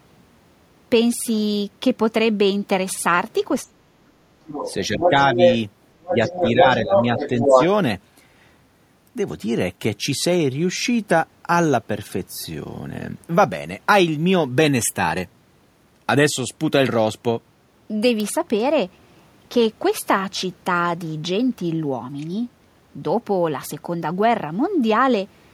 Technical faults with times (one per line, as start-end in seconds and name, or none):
3.68-4.15 speech suppressed in double talk
4.45-5.58 other side's voice leaking through
4.88-5.42 speech suppressed in double talk
6.01-6.65 other side's voice leaking through
6.04-7.60 speech suppressed in double talk
6.91-7.65 other side's voice leaking through